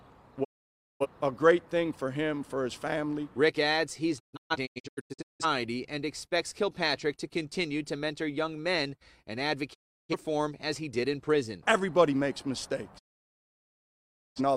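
Digital broadcast dropouts mute the sound at 0.43–1.06 s, 4.18–5.45 s (a cluster of short holes, the longest about 0.17 s), 9.73–10.15 s and 12.97–14.41 s. The receiver stopped getting valid frames and silenced its output after a 20 ms fade, leaving blank full-band spectrogram columns and flat waveform gaps.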